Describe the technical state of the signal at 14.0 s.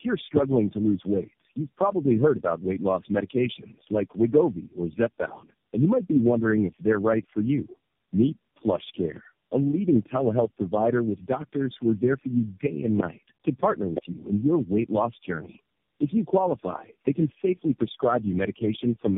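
A single loud pop sits from 13.97 to 14.00 s, just before "you in your weight", peaking at about 15 dB above the speech. It is likely a sudden voltage step from a plug, switch or static discharge, shaped by the following circuitry into one short thump. Unlike a dropout, the speech carries on unbroken underneath it.

The same moment also carries tandem speech coding. The speech has passed through four low-rate speech coders in a row, ending in AMR-NB, with 64 kbit/s G.711 links between them. Each coder reworks the previous one's damage, so the result is rougher, more muffled and more warbly than any single codec would make it, with nothing above 3.7 kHz.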